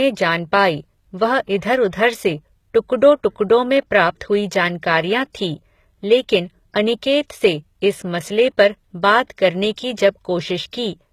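From start to finish, the speech carries HE-AAC compression, likely from a low bitrate around 20 kbps. Above a crossover, the treble is rebuilt from copied lower bands, not the original. Nothing sounds above 14.9 kHz. S sounds come out gritty and metallic.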